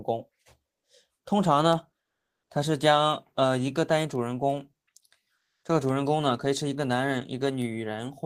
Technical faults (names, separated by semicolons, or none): comfort noise in place of the background